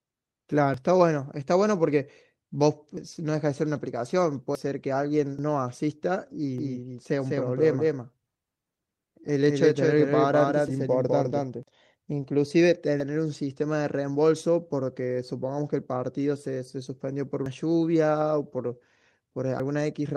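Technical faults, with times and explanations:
0.74, 2.97, 4.55, 5.39, 10.68, 13.00, 17.46 and 19.60 s: dropped buffer (overrun). Each moment is the speech jumping forward. About a tenth of a second is missing at most points, about two tenths at 2.97 and 4.55 s, and about three tenths at 13.00 s. The likely cause is that samples were not collected before the hardware overwrote them, so the two sides butt together. The waveform shows an abrupt discontinuity with no silent gap, and the spectrogram shows a thin vertical broadband line at the join.
5.17 to 5.19 s: lost packet rebuilt from error correction. One 20 ms packet was lost. The decoder played the low-bitrate copy carried in the following Opus packet instead of leaving a gap. That brief stretch sounds rougher and grainier than the surrounding speech. On a spectrogram it appears as a short patch of smeared, noisier texture with less distinct harmonics. 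The waveform stays continuous, with no dropout visible.
6.58 to 11.63 s: doubled audio track. A second copy of the speech runs about 200 ms behind the first and about 5 dB quieter. It sounds like a dry, slapback repeat with no room tail. The likely cause is the same audio arriving twice, once through a slower path. The copy starts and stops abruptly at those times. The spectrogram shows every syllable shape repeated at a fixed offset across the full band. The waveform shows overlapping, shifted envelopes.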